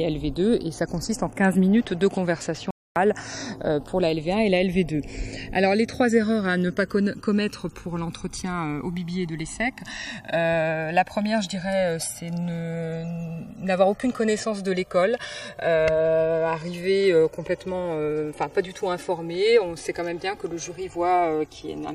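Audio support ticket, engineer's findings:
Channels drifting apart, whole clip. Slow flanging in mono sum, notches sweeping through the spectrum. Inter-channel delay grows steadily to a few milliseconds by the end. Fits two capture devices on separate clocks, error around 150 ppm. Check clock sync between devices.

Playback stall, 2.71 to 2.96 s. Output drops to silence mid-flow for 254 ms, then resumes. Likely player buffer underrun or blocked audio thread. Check buffer sizing and thread priority.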